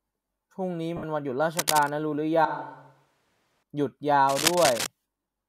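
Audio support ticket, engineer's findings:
Lost LE Audio frames, 0.97–1.04 s: a 60 ms noisy smear, consistent with about six 10 ms LC3 frames concealed by the decoder's repeated spectrum with randomised signs. It differs from a plain dropout because the gap is filled with fading hash rather than true silence.

Cable scratch noise, 1.57–1.92 s at about 5 dB below the signal, and 4.28–4.87 s at about the signal's level: dense, irregular scratching over the speech. Likely a worn cable, connector or control whose contact resistance fluctuated while it moved. It is uneven and bursty, unlike the repeating pattern of codec or transport errors.

Switch to a distant microphone, 2.45–3.63 s: the speech abruptly turns roomy and hollow with thinner bass. It drops about 5 dB, and room noise rises to about 35 dB below the speech. The likely cause is a close-mic failure with fallback to a far pickup. 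The hard cut in and out separates it from gradual EQ or gain drift. The lossy compression on the path is light.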